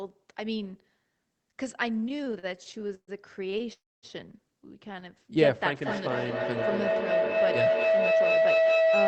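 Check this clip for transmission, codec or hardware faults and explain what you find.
Five faults can be heard: a run of network stalls, a freeze, a brief stall, a feedback howl over the last 3.3 s, and a late speed-up. The audio is band-limited to about 8 kHz, which fits a wideband call codec.

Repeated stalls (stutter), 1.93 to 3.70 s. Packets kept arriving late, so the jitter buffer emptied 18 times. Each gap was bridged by continuing the previous sound, adding 412 ms in all and up to 128 ms at once, about a quarter of the span. It is heard as dragging, hiccupping speech rather than one clean break.

Call audio freeze, 3.73 to 4.06 s. The sound stops for about 0.3 s, a brief fading continuation that drops to near silence for roughly 260 ms, then resumes where it left off. The likely cause is packets held up long enough to drain the buffer. Unlike the stutter, it is a single long pause.

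Short stall from a late packet, 4.93 to 4.97 s. One packet missed its slot, and the receiver stretched the last sound by 15 ms until it came. The result is a barely held moment with a faint buzz or dip. It is far shorter than the freeze and leaves no silence.

Feedback howl, 5.82 s to the end. A microphone and loudspeaker on the same call form a loop that gains level each pass. A tone near 700 Hz builds over a loop delay of about 200 ms, and peaks about 7 dB above the speech. It grows rather than fading, which separates it from ordinary echo.

Jitter buffer speed-up, 8.11 to 8.94 s. After a backlog built up, the receiver cut pitch-period slices, roughly a tenth of a second in total, playing at 114% speed. The speech sounds hurried, but the pitch stays put, which rules out a sample-rate mismatch.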